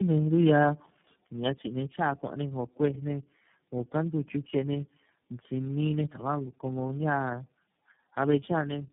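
Tandem speech coding affects the whole clip. The speech sounds like it passed through about four low-rate speech coders in a row, decoded and re-encoded at each hop. Each stage worsens the last. The result is rough, muffled and warbly, with nothing above 3.5 kHz.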